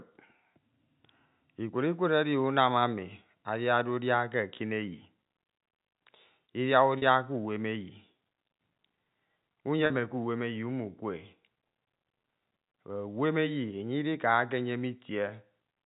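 At 6.98 to 7.02 s and again at 9.86 to 9.90 s the speech briefly holds a slightly buzzy tone. This is packet loss with pitch repetition: each 40 ms gap, which fits two lost 20 ms packets, was bridged by repeating the last pitch period.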